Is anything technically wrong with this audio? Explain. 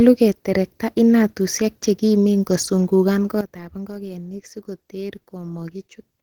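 Yes, there are two faults. Opus voice compression is plainly audible throughout: the codec runs in hybrid mode, with the SILK linear-prediction coder handling the band below 8 kHz and a CELT layer coding the rest up to about 20 kHz. The coarse excitation gives a hoarse, slightly robotic grain, which fits a bitrate around 16 kbps.

A sudden gain jump occurs at 3.41 s, just after "keterekta inatusiek chekimen kosungugan". The level drops by about 13 dB in one step and stays down to the end, with the sound and the background falling together. This is likely a gain change applied without any ramp.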